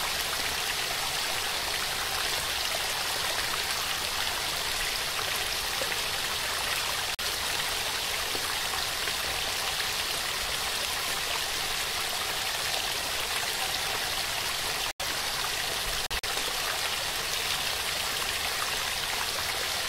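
Abrupt silent gaps at 7.15–7.22 s, 14.91–15.04 s and 16.06–16.28 s are corrupt frame muted dropouts: damaged compressed frames were rejected by the decoder and replaced with silence. The gap lengths fit roughly two, two and four frames, and the sound resumes on time afterwards.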